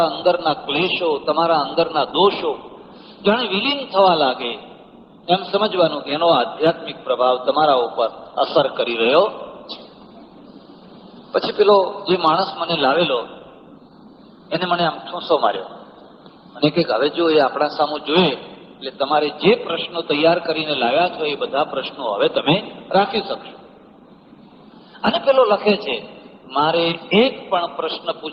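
Nothing in the audio stood out as a technical problem on listening.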